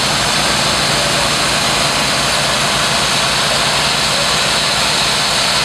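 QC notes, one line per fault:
No technical faults can be heard anywhere in this audio.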